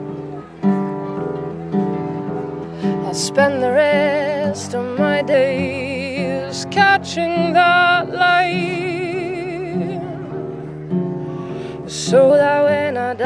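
From 5.34 s to 12.30 s the audio runs slow and low, a wrong sample rate fault: material captured at 24 kHz is played at 22 kHz without conversion, so speed drops to 0.919x and pitch falls about 1.5 semitones. On a spectrogram every harmonic and band edge shifts downward by that ratio, and events stretch wider across the time axis.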